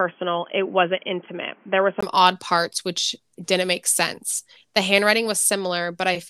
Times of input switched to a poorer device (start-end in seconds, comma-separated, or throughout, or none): 0.00-2.03